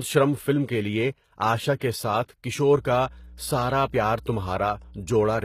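From the start, the speech carries plainly audible codec damage of the kind HE-AAC compression leaves, likely from a stream at a low bitrate around 20 kbps. The upper band is not the original: it is rebuilt from copied lower bands, so its harmonics fail to line up with those below, and s sounds turn gritty and metallic. On a spectrogram the treble looks blocky and repeated, and nothing appears above 14.9 kHz.

At 1.76 to 1.81 s, just before "کے ساتھ کشور", pre-echo smears a sharp onset. The codec spread quantisation noise across its whole transform block, so noise belonging to the loud attack also fills the quiet 51 ms ahead of it, heard as a brief hiss before the onset, which sounds softened. A spectrogram shows a broadband haze just before the attack, and the waveform shows low-level noise where there should be near-silence.

From 2.76 s, after "کے ساتھ کشور", to the end, mains hum runs underneath at 60 Hz, around 20 dB below the speech. 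Power-line energy has coupled into the signal, typically through a ground loop or a nearby transformer, and it is heard as a steady low tone. On a spectrogram it is a continuous horizontal line at 60 Hz beginning at 2.76 s, and the waveform shows a regular low-frequency ripple under the speech.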